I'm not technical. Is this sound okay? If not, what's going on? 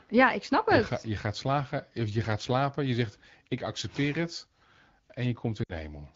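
No. Near the very end, from about 5.64 to 5.72 s, the speech briefly fades, as if it dropped away to near silence before coming back. This is lost AMR speech frames: radio errors spoiled a few short slices of the call, which fits roughly 60 ms of missing speech. The phone's decoder filled the gap by repeating the last good sound at falling volume, which causes that quick fade to near silence.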